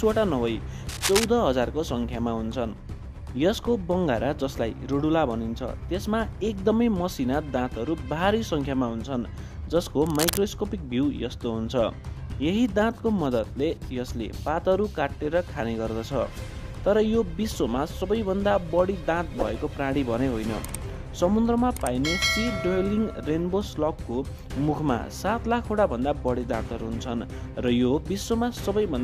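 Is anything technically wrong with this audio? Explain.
Yes. Brief bursts of dense, uneven scratching sit over the sound from 0.89 to 1.24 s, about as loud as the audio itself, and again from 10.06 to 10.38 s, a little quieter. This is cable scratch noise, likely from a worn cable or connector shifting and rapidly changing its contact resistance.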